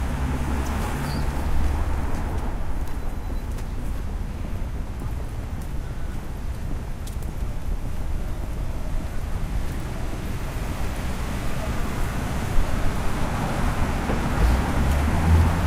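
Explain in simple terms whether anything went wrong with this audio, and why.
Corrupt frame decoded, 0.91 to 0.94 s: a couple of compressed frames were damaged but played anyway, putting sound at wrong pitches and causing a brief glitch.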